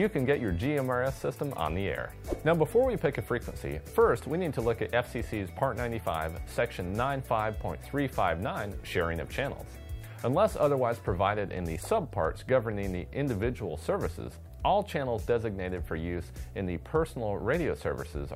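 The signal has no technical faults audible at any point in the recording.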